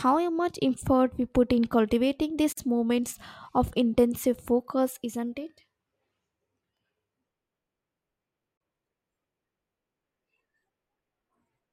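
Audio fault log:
2.53–2.57 s and 8.57–8.61 s, gap at a join of encoded pieces: the speech drops out for about 49 ms after "we put in cultivating" and again for 34 ms, then resumes where it stopped. Separately encoded pieces, joined every 6 s untrimmed, leave encoder start delay and last-frame padding in place.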